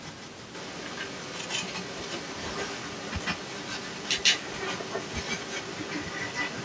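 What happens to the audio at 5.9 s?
At 5.9 s the speech carries a delayed copy of itself trailing about 147 ms behind, roughly as loud as the original or a little louder, and this runs throughout the clip. It is an echo leak, likely from a far-end loudspeaker whose echo canceller let the pickup back into the call.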